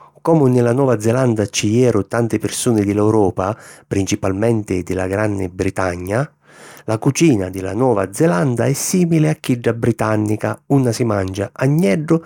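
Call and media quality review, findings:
No audible faults found in the speech; nothing to raise against any component.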